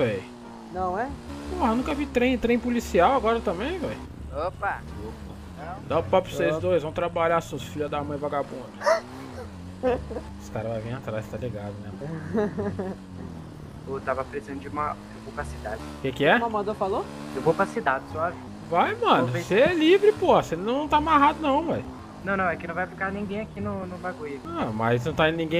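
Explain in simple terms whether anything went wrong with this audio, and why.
Small clicks or tiny skips can be heard at 1.91, 7.88, 17.87 and 21.85 seconds. This is overlap between stream segments. The audio arrives in 2-second pieces, and where two pieces' timings overlapped, a few milliseconds of real sound were cut, making the waveform jump.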